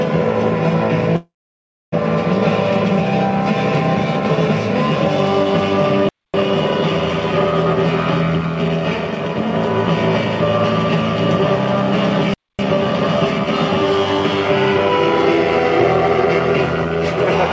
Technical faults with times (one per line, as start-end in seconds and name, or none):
1.16-1.94 call audio freeze
6.09-6.34 gap between chunks
12.34-12.59 gap between chunks